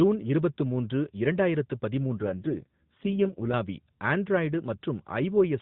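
Right after "இருபத்து மூன்று இரண்டாயிரத்து", from 2.17 to 3.55 s, there's an AMR rate drop. The speech turns buzzy and synthetic while staying in the same narrow AMR-NB band with no gap, which fits the codec falling from 12.2 to 4.75 kbps on a weak link before recovering.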